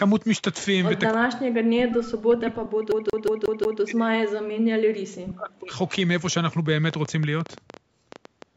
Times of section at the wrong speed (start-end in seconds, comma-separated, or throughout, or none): none